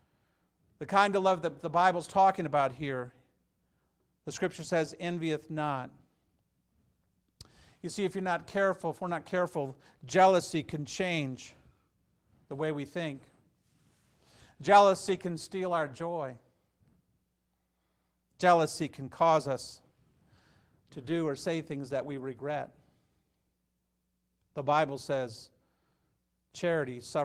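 At 2.57–2.63 s, 15.07–15.17 s (before "can steal our joy"), 21.09–21.11 s and 22.17–22.19 s, lost packets were rebuilt from error correction. Low-bitrate copies replaced them, so the speech turns briefly rough and noisy without dropping out or repeating, as concealment would.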